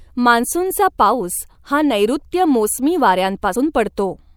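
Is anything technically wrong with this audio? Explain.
Yes, there's one glitch in this speech clip. At about 3.54 s you get compressed frames skipped: a few whole frames of the encoded stream never got played, either because they were missing from the file or because the decoder rejected them as corrupt. The speech jumps forward by roughly 70 ms, which fits about three frames of 24 ms each.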